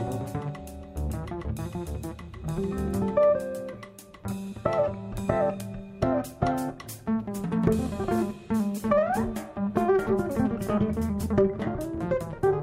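At 5.60 s, a bit error spike: a flipped bit corrupts three consecutive samples, jumping about -19 dBFS and back, heard as one sharp broadband tick.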